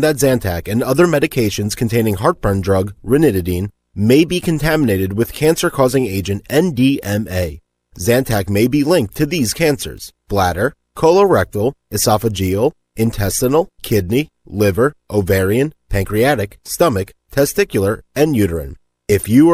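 No technical faults are audible anywhere in the speech recording.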